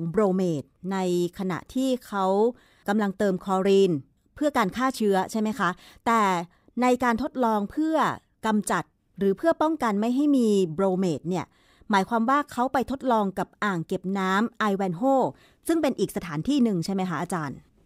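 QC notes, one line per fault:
Nothing to log for this speech recording. No moment in it calls for a timed entry.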